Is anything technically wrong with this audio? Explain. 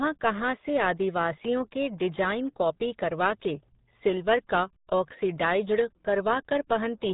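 Yes. Throughout, the speech carries RealAudio 14.4 codec damage. This early dial-up codec squeezes the signal hard, which fits a bitrate around 8 kbit/s. Nothing above 3.8 kHz survives, so the speech sounds muffled, with a heavy gargling, watery texture.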